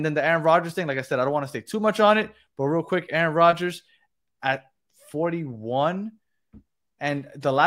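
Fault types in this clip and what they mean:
No technical faults are audible in this speech.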